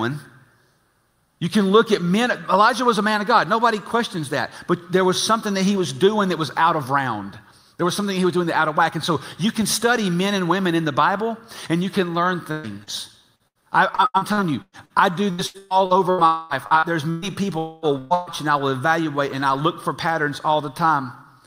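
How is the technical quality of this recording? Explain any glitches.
The recording has clear network damage in its second half, with three kinds of glitch clustered between about 12.5 and 18.3 seconds.

From 12.51 to 17.25 s there is repeated packet loss, giving a robotic sound. Eighteen separate holes, the longest about 121 ms, are each patched by extending the preceding sound, so roughly a quarter of that stretch is synthetic fill. The result is choppy. On a spectrogram, short smeared, flattened blocks interrupt the normal texture again and again. The waveform shows repeated stretches of oddly regular, decaying cycles.

At 16.26 to 16.53 s and again at 17.58 to 17.85 s, the audio stalls for about a quarter of a second each time. This is likely a long network dropout. The last sound is carried on as a fading buzz or hiss for the whole gap rather than dropping to silence, and the audio resumes further along with that section gone. 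A spectrogram would show horizontal streaks of held harmonics or hiss thinning out toward the right. The waveform shows a tapering, repetitive envelope.

Two bursts of packet loss follow almost back to back, at 17.98 to 18.13 s and 18.14 to 18.29 s. Each one replaces about 120 ms with concealment that continues the previous sound while turning it down. The ear hears a brief held buzz or fading hiss and then a jump forward in the audio. Visually, each is a short band of frozen spectral content with a downward-ramping amplitude, ending in an abrupt change where real audio returns.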